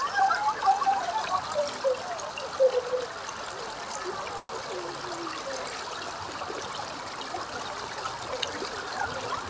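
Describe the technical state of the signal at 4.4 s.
A call audio freeze runs from 4.38 to 4.51 s, likely from delayed packets draining the jitter buffer. The last sound is stretched into a fading buzz or hiss, then about 20 ms of silence, and the sound resumes intact but 112 ms late. On a spectrogram this shows as horizontally smeared bands that fade to a blank gap.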